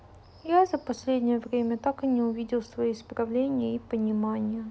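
Nothing goes wrong at any point in this bit of speech, so there's simply no fault to point to.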